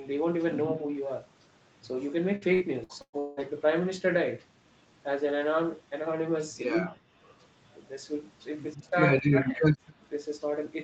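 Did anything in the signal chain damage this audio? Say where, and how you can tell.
Yes. At the call-processing stage, speech is suppressed in double talk four times: 0.77–0.86 s (a shallow dip of about 5 dB), 6.78–7.07 s (about 40 dB), 8.74–8.96 s (about 25 dB) and 9.13–9.73 s (about 30 dB). The likely cause is the echo canceller's suppressor mistaking simultaneous far-end activity for echo and clamping the near-end signal. On a waveform the envelope caves in abruptly; a spectrogram shows the harmonics thinning or blanking for those spans.

The network stage shows repeated packet loss with a robotic sound from 2.35 to 3.40 s. Five gaps fall in that second, the longest 177 ms, and concealment has to synthesise about 45% of the span by extending the preceding sound. That gives the choppy character. A spectrogram shows smeared, frozen harmonic stripes repeating with hard edges. The waveform shows periodic, copy-like segments where real speech has dropped out.

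Echo leak appears as faint delayed copies at 7.40–7.45 s (about 40 dB below the speech) and 9.86–9.94 s (about 30 dB below), both trailing the source by 122 ms. The likely cause is loudspeaker pickup at the far end that its canceller did not fully remove before sending it back. A spectrogram shows a weak ghost of the preceding harmonic pattern shifted 122 ms later, inside the Opus path's 8 kHz ceiling.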